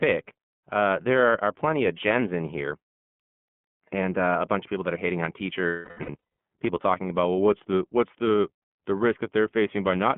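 Throughout, the speech sounds thin, boxed-in and slightly rough and synthetic, confined to roughly 150 Hz to 3.4 kHz with nothing above 4 kHz. That is the iLBC codec, a narrowband VoIP coder whose character points to its 13.33 kbps, 30 ms frame mode.

From 5.67 to 6.16 s, after "that are hating on", the speech turns into a held, buzzy, breathy vowel that fades. These are lost iLBC frames: about 630 ms went missing in scattered bursts, the longest around a third of a second. The decoder repeated the last pitch cycle mixed with noise, and because each frame stands alone it recovers at once on "people talking about well".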